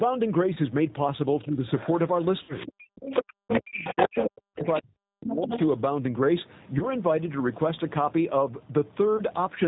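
The whole recording passes through the G.729 codec at 8 kbit/s, which rebuilds speech from a vocal-tract filter, a pitch predictor and a few sparse pulses per frame. It sounds slightly rough and synthetic. A spectrogram shows the energy stopping sharply at 4 kHz, with blank space above, and the harmonics look smeared and grainy rather than cleanly striated.

The first VoIP packet loss concealed by the speech codec comes at 0.54 to 0.58 s. About 20 ms of audio, which fits a single packet, went missing. The decoder filled the gap by extending its last pitch and filter settings at falling gain. It sounds like a brief smear. On the waveform the envelope sags for a moment before normal detail returns.

From 1.44 to 1.64 s the talker's level dips by about 5 dB, over roughly 150 ms. This is likely speech suppressed in double talk: the echo canceller turns down its own talker while the far end is active. 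Starting at 1.46 s, the other side's voice leaking through appears at about the same level as the talker and continues to 4.25 s. The likely cause is loudspeaker echo the canceller failed to remove. On a spectrogram this shows as a second, unrelated set of harmonic traces overlapping the first.

A longer concealment runs from 2.43 to 2.55 s. About 60 ms was lost, which points to three consecutive packets. The extrapolation decays audibly as it fades, and the degraded sound persists briefly afterwards as the decoder recovers.

From 2.67 to 5.52 s the double-talk suppression becomes severe. For roughly two seconds in total the talker drops by up to about 40 dB, so the waveform collapses to near silence in stretches and the sound cuts in and out. Within and just after that span the leak returns at 4.60 to 4.81 s, about 15 dB below the talker, and at 5.29 to 5.66 s, about 5 dB below.

Further single-packet concealments, each about 20 ms, occur at 6.79 to 6.85 s and 9.17 to 9.22 s. 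Both are heard as short blurs with momentary dips in the envelope.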